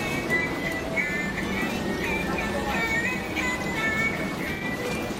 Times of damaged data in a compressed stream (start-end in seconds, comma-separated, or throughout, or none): none